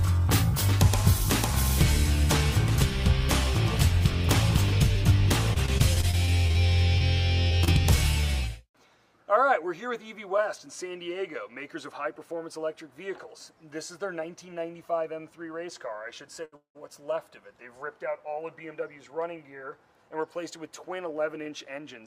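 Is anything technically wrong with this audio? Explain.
Yes, there are three problems, all from packets not arriving on time in a call path.

From 5.53 to 8.24 s there is repeated packet loss (robotic sound). Packets went missing thirteen times, with the longest gap 35 ms. Each hole was covered by stretching the preceding sound, about 290 ms of patching across the stretch, with around 200 ms of actual audio lost. Because the gaps come close together, the sound turns choppy, with small pieces dropped out.

At 16.45 to 16.54 s comes a short stall from a late packet. One packet missed its slot and the jitter buffer drained, so the receiver held the last sound for about 71 ms until the packet showed up, then carried on from where it had paused. Nothing is lost, but that moment is drawn out unnaturally, with a slight buzz or dip.

Immediately after, from 16.56 to 16.77 s, there is a call audio freeze, likely caused by packets being held up on the way and the buffer running dry again. 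The last sound is extended for about 185 ms, fading, and about 110 ms of that is silence, before the audio picks up where it stopped. Little or nothing is missing, but a gap has been inserted.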